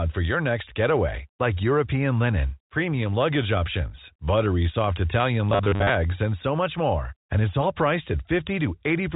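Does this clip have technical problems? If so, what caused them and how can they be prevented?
Yes. From 5.50 to 5.89 s, just before "and so much more", the speech turns into robotic sound from repeated short buffers: a rigid 100 Hz buzz is imposed on the speech. The likely cause is audio arriving too seldom, so the software loops the last 10 ms or so while most of the real audio in that stretch is skipped. A waveform would show identical 10 ms segments repeating, and a spectrogram would show flat harmonic lines at multiples of 100 Hz. The clip passes through G.711 telephone coding, so nothing above 3.8 kHz is present. Preventing the glitch means giving the audio path enough buffering and scheduling priority that new audio always arrives in time.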